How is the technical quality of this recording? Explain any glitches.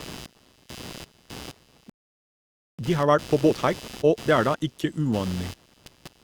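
The technical quality is poor. Three faults are audible: a constant interference buzz, a dropout in the middle of the speech, and a hurried stretch right after it.

Computer activity noise runs through the whole recording. It is a buzzy, scratchy layer pulsing at around 150 per second, sitting roughly 20 dB below the speech. Changing processor, graphics or mouse load shifts the ground shared with the audio circuit, so the interference follows the computer's activity rather than the speech. On a spectrogram it appears as faint horizontal bands at about 150 Hz and its harmonics, present even in the pauses.

A playback stall silences the output from 1.90 s to 2.79 s, a gap of about 0.89 s. The speech cuts off mid-flow and then resumes. The likely cause is that the player ran out of buffered data or its thread was blocked, so nothing reached the output until it recovered. The waveform drops to a flat line for that stretch, and the spectrogram shows a blank vertical band.

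Time-compressed catch-up follows from 2.79 s to 4.57 s. The player works off its backlog by cutting out small pieces and cross-fading the joins, so the speech runs at 1.5 times normal speed but keeps its pitch. It sounds rushed. On a spectrogram, syllables and pauses are squeezed closer together while the harmonic spacing stays the same, and small discontinuities may show at the splice points.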